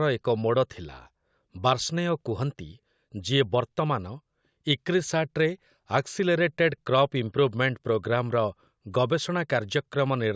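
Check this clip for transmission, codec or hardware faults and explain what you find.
No faults found in this clip.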